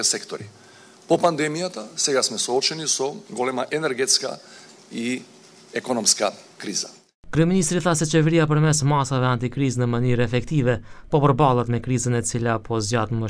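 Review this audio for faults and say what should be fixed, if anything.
Nothing here needs fixing; no faults were found.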